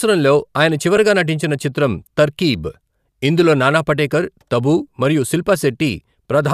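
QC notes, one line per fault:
0.96 s, lost LE Audio frames: a brief grainy smear just before "నటించిన చిత్రం 'తర్కీబ్' ఇందులో". It lasts 7.5 ms, fitting one lost frame. The decoder refilled it with the previous spectrum, signs scrambled.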